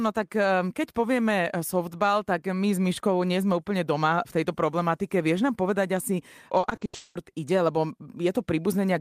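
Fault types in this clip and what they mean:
Repeated packet loss (robotic sound): from 6.59 to 7.17 s, six gaps in quick succession remove about 380 ms of speech, each patched by stretching the preceding sound, the longest hole 200 ms. It sounds choppy, with pieces missing; a spectrogram shows smeared, frozen harmonic bands instead of normal articulation.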